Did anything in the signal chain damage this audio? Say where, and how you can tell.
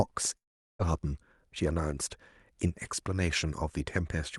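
Yes, a long network dropout from 0.37 s to 0.82 s. The speech stops and a fading, buzzy continuation of the last sound gives way to near silence for about 0.4 s, then speech resumes with that stretch gone. This is likely packet loss on the network, masked by the receiver's concealment.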